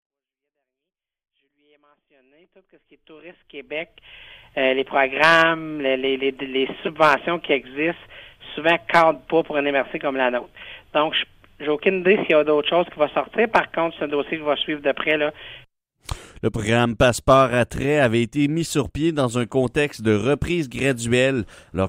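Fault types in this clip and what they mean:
No technical faults can be heard in this clip. The level rises gently from silence at the very beginning and reaches full level at about 4.47 s, with no click or hard edge.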